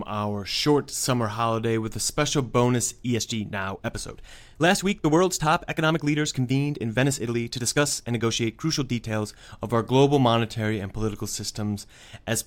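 From 3.01 to 9.55 s the speech suddenly turns rushed while its pitch holds steady, a time-stretched section running at 1.4 times speed. Software likely squeezed this stretch to fit a shorter length, dropping short slices to keep the pitch.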